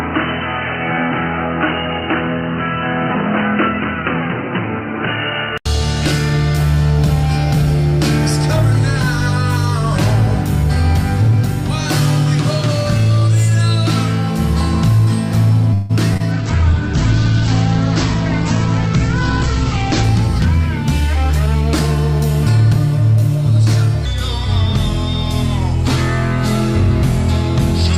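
From the start to 5.66 s the sound is dull and boxy, with a slightly lower level and a faint new background noise, ending in a brief 80 ms silence. This points to an input switched to a poorer, narrower-band device.

At 15.73 s a 161 ms buzzy continuation of the last sound fills a call audio freeze. The audio likely stalled while packets were delayed and the jitter buffer ran dry, then resumed without losing anything.

Two brief smears follow at 16.13 s and 16.17 s, filled over 16 ms and 26 ms. These are short concealed packet loss, where about 20 ms of audio each time never arrived and was patched by extrapolation.

From 16.33 s to 20.12 s the sound turns rough, watery and muffled. This is a call bitrate drop from 48 to 9 kbps, with the audio band narrowed from 20 kHz to 8 kHz for about 3.7 s.

Between 21.00 s and 21.63 s the audio sounds hurried at an unchanged pitch, playing at 118% speed. 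This is a jitter buffer speed-up that trimmed roughly 150 ms of pitch periods to reduce delay.

From 24.05 s to the end, the sound plays slow and deep, at 0.852 speed and about three semitones lower. This is a section at the wrong speed, with the audio likely resampled against the wrong clock.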